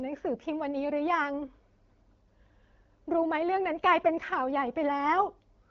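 No technical faults can be heard in the speech, which comes through an AMR wideband (HD Voice) link at 12.65 kbit/s, a rate where the codec's effect on the sound is only light.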